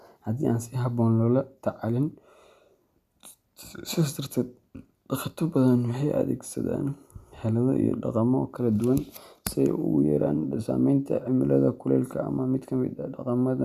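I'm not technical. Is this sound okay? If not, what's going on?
Yes, this sound is okay, and there's nothing going on that needs fixing.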